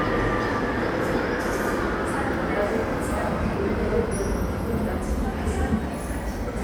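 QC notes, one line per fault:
Nothing to flag here; the sound comes through fine with no faults to note.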